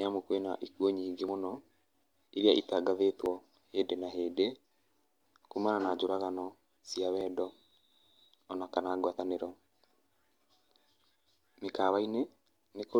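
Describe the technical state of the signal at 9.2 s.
At 9.19 s the speech jumps forward abruptly. Roughly 30 ms of sound is gone, and the two sides are butted together with no gap. This is likely audio missing between chunks, lost while one 2-second block closed and the next opened.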